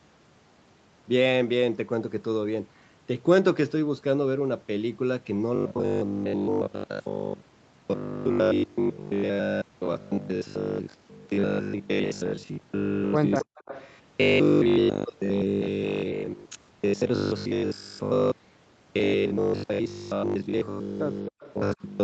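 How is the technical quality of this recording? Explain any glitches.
The recording has clear faults: a robotic buzz over the second part of the speech, plus brief echo and dropouts near 13.4 s and 21.3 s.

From 5.56 s to the end, the speech turns into a rigid, metallic buzz at a fixed 50 Hz while still loosely following the speech. The likely cause is robotic sound from repeated short buffers: audio arrives too seldom, so roughly 20 ms chunks are replayed, covering most of the span. Unlike echo, no delayed copy is heard.

An echo leak appears from 13.41 to 13.91 s and from 21.40 to 21.53 s as a faint copy of the speech trailing 269 ms behind, roughly 15 dB and then 25 dB below it. The likely cause is a loudspeaker echo that the canceller failed to remove. It differs from the buzz because it repeats actual speech after a fixed delay.

Speech suppressed in double talk shows as sudden dips from 13.44 to 13.55 s, from 21.28 to 21.41 s and from 21.74 to 21.82 s, falling by roughly 40, 40 and 25 dB. 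The likely cause is the echo canceller ducking the talker while the far side also spoke. These are gaps in the speech itself, not added sound.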